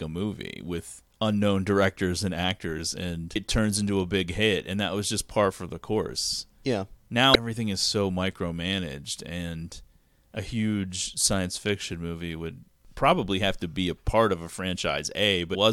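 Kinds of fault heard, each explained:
Damaged data in a compressed stream: corrupted bytes in the encoded speech make the decoder misread a frame, lose sync and hunt for the next valid header, leaving a brief garbled blip in place of the proper audio. Three such blips occur, each under 20 ms: at 3.35 s, between "directors and actors and" and "turns into a big"; at 7.34 s, just before "is so micromanaged and"; and at 15.54 s, near the end.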